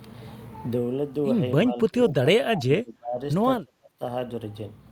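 The speech drops away sharply three times, from 1.7 to 2.27 s, from 2.43 to 3.2 s and from 3.61 to 4.01 s, sinking by roughly 30 dB or more. This is speech suppressed in double talk, likely caused by the far side talking at the same moment: the echo canceller could not tell this talker apart from loudspeaker echo and attenuated everything.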